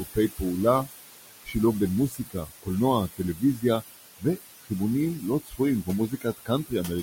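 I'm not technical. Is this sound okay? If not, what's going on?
No. Throughout the clip there are noise suppressor artifacts: a filter keeps pushing the room's background noise down between phrases and letting it back up under the speech, so the noise pumps instead of staying steady, unlike ordinary room noise, which holds an even level.

There are also moments of speech cut by the noise suppressor, at 0 to 0.41, 1.45 to 1.55, 2.09 to 2.68, 3.16 to 3.63, 4.19 to 4.71 and 5.2 to 6.72 seconds. Soft sounds and word endings inside these spans get mistaken for noise and turned down, so they sound swallowed, not cut to silence as in a dropout.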